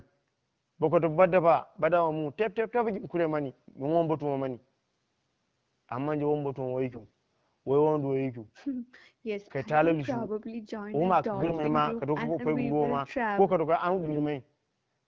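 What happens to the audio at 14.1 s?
At 14.1 s the speech is hit by AMR bit errors, from 14.00 to 14.18 s. The less protected bits of the AMR-WB frames arrived flipped at a rate of roughly one in ten, which scatters the excitation pulses and skews the finer gain and spectrum values. The speech keeps its pitch and level but turns hoarse, scratchy and gargly.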